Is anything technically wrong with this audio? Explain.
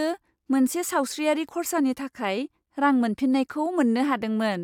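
Yes. The speech jumps with a small click or skip at 0.49 s, 1.48 s and 3.47 s, where roughly 6 ms, 5 ms and 15 ms of sound go missing and the waveform snaps abruptly to later material. This is overlap between stream segments: neighbouring one-second segments claim overlapping time, and the player trims that overlap even though the audio wasn't actually duplicated. The skips therefore land on segment boundaries, one or two seconds apart.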